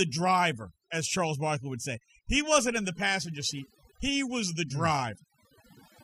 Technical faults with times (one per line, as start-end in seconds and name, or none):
0.00-6.04 overdone noise removal